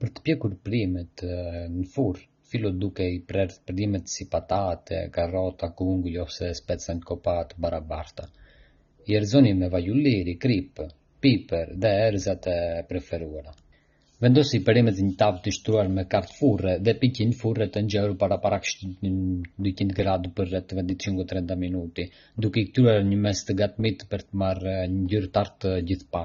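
From start to finish, the speech has no content above 6.9 kHz and carries plainly audible codec damage. The likely cause is AAC compression, with the dull, smeared, warbling character pointing to AAC-LC at a low bitrate around 24 kbps. The encoder lowered its cut-off and quantised the spectrum coarsely, so sibilants turn fizzy and sustained sounds waver. A spectrogram shows a flat ceiling at 6.9 kHz and patchy bands beneath it.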